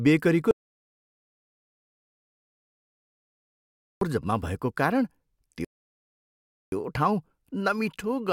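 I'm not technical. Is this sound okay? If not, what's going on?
No. There are two problems. From 0.51 to 4.01 seconds there is an audio dropout to silence. The speech stops dead, with no background sound at all, and returns just before "जम्मा भएको कारण". About 2.7 seconds of speech is gone. The likely cause is a lost connection to the microphone or recorder.

From 5.65 to 6.72 seconds there is a rebuffering stall. The player ran short of audio and paused while it waited for more. The speech then carries on exactly where it stopped. Nothing is missing, but about a second of silence is added.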